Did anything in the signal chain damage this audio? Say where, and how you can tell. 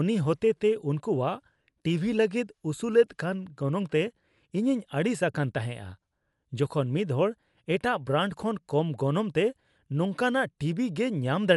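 Yes, at the codec stage, and the damage runs through the whole speech clip. The audio sounds dull, with a rough, fluttering noise hanging around voiced tones, and a spectrogram shows nothing above 11.5 kHz, a flat ceiling with mottled, noisy patches where harmonic lines should be smooth. That pattern likely comes from Dolby Digital compression at a low rate, fitting about 64 kbps: the encoder narrowed the band and starved many frequency lines of bits, leaving the decoder to fill them with noise.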